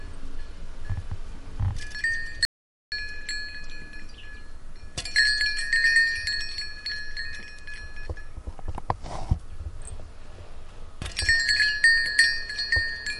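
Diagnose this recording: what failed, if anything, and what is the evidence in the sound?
The sound cuts to dead digital silence from 2.45 to 2.92 s, with no room tone. Silence was written for about 0.47 s, likely after the input link dropped.

A brief burst of burbling runs from 4.30 to 4.42 s. This is DAB burbling: a small trickle of reception bit errors slipped past error correction, corrupting the MP2 audio data across about four frames.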